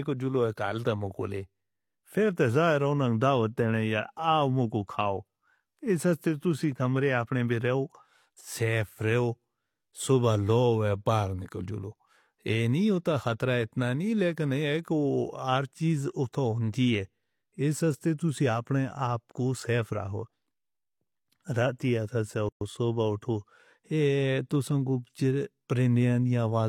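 At 22.49 s the speech breaks off for about 123 ms, until 22.61 s, a gap at a join of encoded pieces. Separately encoded segments were spliced with their encoder start delay and final-frame padding left in. Unlike a dropout, nothing is lost: the speech resumes exactly where it broke off, with smeared edges.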